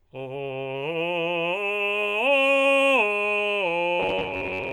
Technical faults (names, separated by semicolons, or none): robotic sound from repeated short buffers